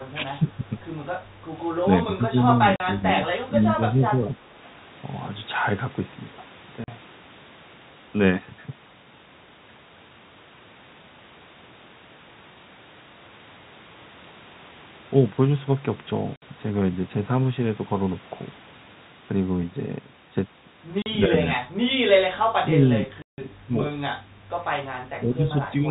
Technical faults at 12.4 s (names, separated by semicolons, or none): none